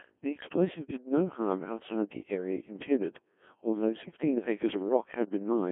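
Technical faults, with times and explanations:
Throughout: Codec 2 vocoder. The speech is rebuilt from sine waves driven only by pitch, voicing, energy and a coarse spectral envelope, so it comes out robotic and buzzy. The heavy damage fits a rate of about 1.6 kbit/s. A spectrogram shows neat, overly regular harmonic stripes confined to roughly 200 Hz to 3.4 kHz, with nothing above 3.5 kHz. The waveform no longer matches the original's shape.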